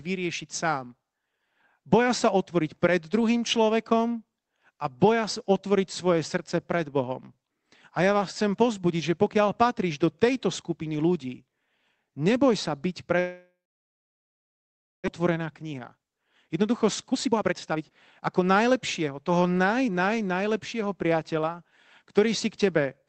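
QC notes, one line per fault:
13.19–15.08 s, long network dropout: right after "sa byť" the incoming audio stops for about 1.9 s. The receiver stretches the last sound into a fading buzz, and then roughly 1.5 s of near-silence follows. The likely cause is a gap in packet delivery. About 1 s of the original speech never plays, so the sentence resumes further along, and the playout delay has grown by around a second.
15.20–20.12 s, jitter buffer speed-up: the speech runs about 17% fast while the pitch holds steady, ending just before "najlepšieho priateľa". The buffer has built up excess audio after the dropout, so the receiver repeatedly trims pitch-period-sized slices to drain it. Roughly a second is removed across this stretch. The delivery sounds hurried and clipped, but there is no chipmunk shift because whole cycles are cut rather than resampled.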